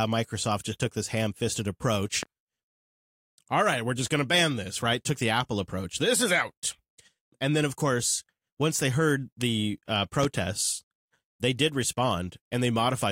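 A speech recording with two loud pops laid over it, at 2.23 to 2.27 s and 10.23 to 10.27 s. Each is a single sharp transient lasting about 40 ms, peaking roughly 10 dB above the speech level in the first case and roughly 15 dB in the second, while the speech continues underneath. The likely cause is an electrical pulse from a plug, switch, static discharge or driver glitch entering the signal chain.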